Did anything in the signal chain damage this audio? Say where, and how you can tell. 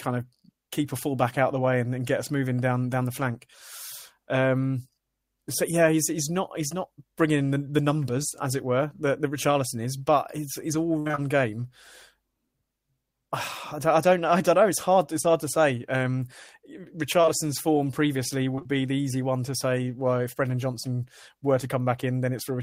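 Yes, at the network stage: repeated packet loss (robotic sound) at 10.99–11.19 s after "but his his all". Four gaps up to 60 ms were patched with repeated sound, visible as smeared, stair-stepped spectrogram bands.

Short concealed packet loss occurs at 15.21 s, 17.22–17.29 s before "form previously", and 18.55–18.67 s before "be the easy one". Each is a 20 ms hole filled by extrapolation, seen as brief blurred waveform seams.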